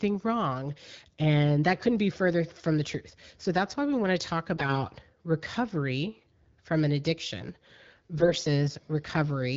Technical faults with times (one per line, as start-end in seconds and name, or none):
4.56-4.85 AMR bit errors
8.18-8.48 AMR bit errors